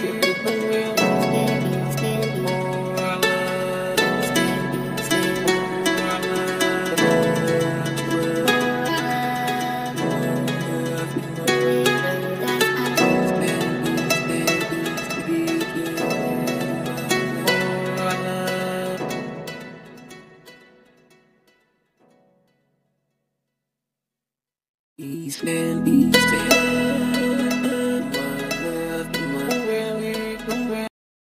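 Final buffers were never written or played, giving a cut-off end at 30.88 s: the sound stops mid-event and drops straight to digital silence without decay.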